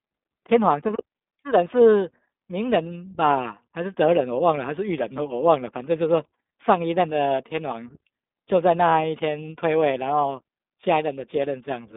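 Throughout, the speech sounds thin, slightly rough and synthetic, confined to roughly 200 Hz to 3.7 kHz. That is the iLBC codec: each 20 ms frame's excitation is coded on its own, which fits the 15.2 kbps mode and leaves plainly audible coding damage.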